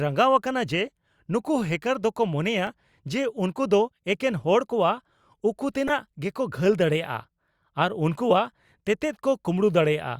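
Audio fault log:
0.86 s and 5.87 to 5.91 s, corrupt frame decoded: a brief chirpy blip, the second longer. Damaged bits in the compressed stream were decoded anyway, so misread gains and codes put energy at the wrong frequencies for about one frame, then about two frames.
2.67 s, repeated buffer: a single tiny click in the speech. New audio arrived late, so the device played its last block once more, about 1.45 ms long, which fits a 64-sample buffer. The hard join at the repeat sounds as a click rather than a stutter.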